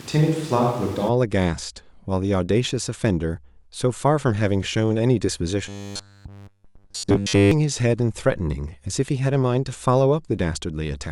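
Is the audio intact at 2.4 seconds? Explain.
Yes, at 2.4 seconds the speech plays through intact, with no dropout, click, distortion or other fault at that point.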